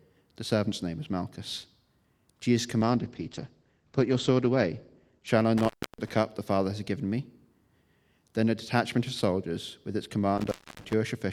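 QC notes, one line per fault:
2.82–5.33 s, call bitrate drop: the call's bandwidth estimate collapsed and the encoder was forced onto far fewer bits, which fits a fall from 128 kbps to around 13 kbps, held at the low rate for about 2.45 s. Audio bandwidth narrows from 20 kHz to 8 kHz, so the top end disappears and the sound turns muffled. The coarser coding adds a rough, watery texture until the rate recovers at 5.33 s.
5.57–6.10 s and 10.38–10.93 s, intermittent contact: a loose cable or plug momentarily opens the signal path. The line is open for about 294 ms in the first event and about 279 ms in the second, and the audio drops out for that span. Each break is bracketed by crackle as the contact makes and breaks, with faint hiss audible in the gap.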